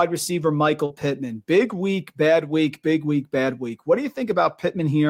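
From 0.85 to 0.92 s, short concealed packet loss: about 40 ms of the speech failed to reach the decoder in time, and the receiver patched the gap with roughly 42 ms of extrapolated sound before blending back, leaving a brief smeared, wobbly blip.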